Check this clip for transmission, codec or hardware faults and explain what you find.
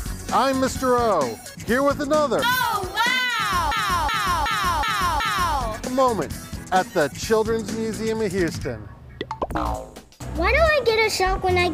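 A system hang loop runs from 3.72 to 5.57 s. The host or driver stalled while the sound hardware kept replaying its ring buffer. One 371.5 ms slice repeats five times at 2.69 Hz, a skipping-record repeat consistent with a 16384-sample buffer.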